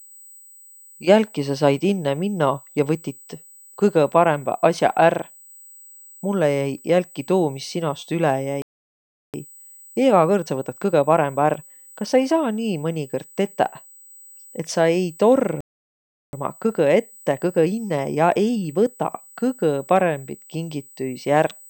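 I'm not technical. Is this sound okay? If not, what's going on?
No. USB whine runs through the whole clip: a thin, steady, high-pitched tone at 8 kHz, strongest at 16 kHz. It comes from the USB connection's regular pulses of electrical activity leaking into the audio through the power or ground wiring.

Playback stall at 8.62 s, right after "sinost üle", and again at 15.61 s: the sound cuts out mid-flow for about 0.72 seconds each time. The likely cause is that the player ran out of audio data or was briefly held up, leaving nothing to play.

Time-compressed catch-up follows each stall, from 9.34 to 12.34 s at 1.15 times normal speed and from 16.33 to 19.33 s at 1.1 times. The player trims tiny slices and blends the joins to catch up, so the sound seems hurried while its pitch stays normal.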